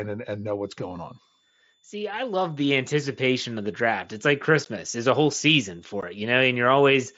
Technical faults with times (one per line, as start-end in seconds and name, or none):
0.64-7.17 switching supply whistle
4.65 unconcealed Bluetooth headset packet loss
6.01 unconcealed Bluetooth headset packet loss